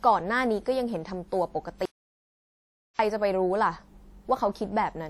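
From the start, the speech carries the smeared, swirly texture of a low-bitrate encode even though it's sitting in a roomy 192 kbit/s MP3, with nothing above 20 kHz. That's low-bitrate audio saved at a high bitrate, likely a 48 kbit/s WMA re-encoded, so the bigger file can't restore what was thrown away.

Then at 1.85 s the sound drops out to dead silence, with no room tone at all, until 2.99 s, so about 1.14 s of speech is simply gone. That's an audio dropout to silence, likely the input cutting out while the recorder kept writing silence.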